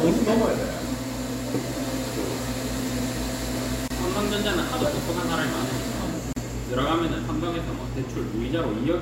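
Two brief silences break the continuous sound, at 3.88 to 3.90 s (about 25 ms) and 6.33 to 6.36 s (about 37 ms): gaps at joins of encoded pieces, where leftover encoder delay and frame padding remained.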